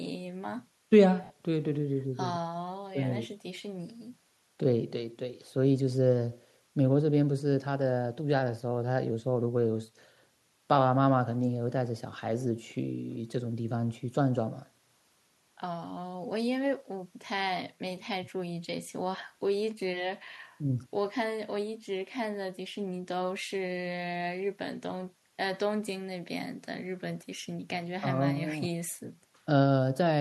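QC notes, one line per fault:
1.24–1.30 s, lost LE Audio frames: a 60 ms gap, which fits six lost 10 ms frames, where the sound becomes a hissy smear that keeps the preceding sound's spectral colour and starts to fade before normal audio returns. The decoder is repeating the last good spectrum with scrambled signs and attenuating it. Unlike a hard dropout, it never falls to true silence, and the faint grain elsewhere is likely light LC3 coding.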